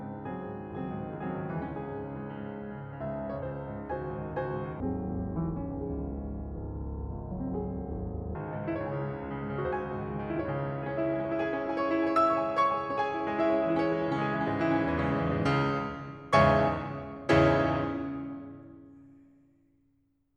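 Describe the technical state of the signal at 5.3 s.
At 5.3 s the music sits inside a stereo read as mono fault running from 4.80 to 8.35 s. The player takes the interleaved left and right samples as one continuous channel, so each stereo frame becomes two consecutive samples. The music plays at half speed and drops a full octave, 12 semitones down, and a fainter mirrored copy of the sound shows up in the upper half of the spectrum.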